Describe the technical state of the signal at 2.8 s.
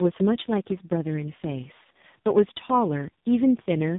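At 2.8 s the speech sounds rough, muffled and warbly, with nothing above 3.8 kHz. This is tandem speech coding, present throughout: the signal passed through G.726 at 24 kbit/s, G.711 mu-law, then AMR-NB at 5.9 kbit/s, each coder compounding the previous one's damage.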